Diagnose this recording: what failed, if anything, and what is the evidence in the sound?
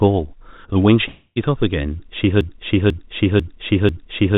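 Long network dropout, 1.08 to 1.38 s: the last sound is stretched into a fading buzz for 0.28 s, then briefly silent, likely from packets lost in transit.

Broken-record loop, 2.41 s to the end: one 0.49 s fragment repeats back to back four times, likely a stalled stream resending its last held buffer.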